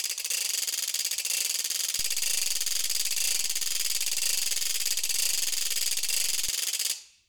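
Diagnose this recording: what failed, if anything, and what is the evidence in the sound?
A DC step at the converter or analogue input: a low thump at 1.99 s as the waveform's zero line jumps by about -33 dBFS, holding until a second thump at 6.49 s when it returns. The music continues unchanged. On a waveform, the baseline visibly shifts; a spectrogram shows brief broadband low-frequency bursts at both edges.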